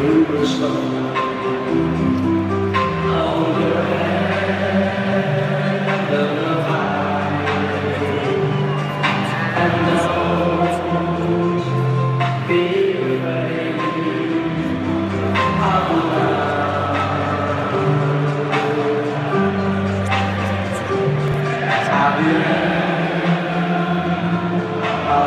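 At 21.28 to 21.34 s, chunks play out of order: one 20 ms chunk arrives two chunks late, after the pair meant to follow it. No audio is lost, but three hard joins cause a brief jumbled stutter, visible as waveform steps and thin vertical broadband streaks.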